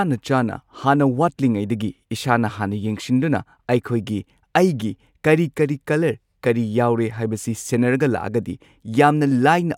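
No technical faults can be heard anywhere in the recording, which runs without any interruption, distortion or change in level.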